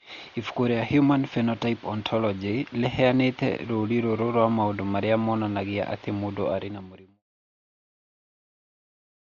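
Speech run through what is likely Dolby Digital compression at a very low bitrate, around 40 kbps, where the encoder narrows the band and leaves many frequency lines without mantissa bits for the decoder to fill with dither noise. The result is dull, heavily damaged audio with nothing above 6.9 kHz and a rough, fluttering noise clinging to voiced tones, and the level fades out smoothly from around 6 s to 7.23 s.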